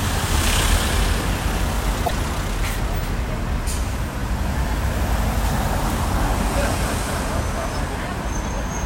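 A short recording of sounds, with one burst of damaged data in a compressed stream from 2.03 to 2.11 s. That stretch lasts about 80 ms. Part of the compressed data there is corrupt. Bytes were lost, zeroed or overwritten. The decoder cannot read those frames correctly. It loses sync and hunts for the next valid frame header. The result is a brief burst of wrong sound in place of the real audio, and playback resumes once the decoder locks on again.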